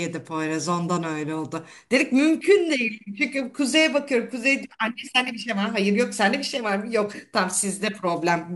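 No technical faults can be heard anywhere in the speech; the signal holds steady throughout without any break or disturbance in the audio path.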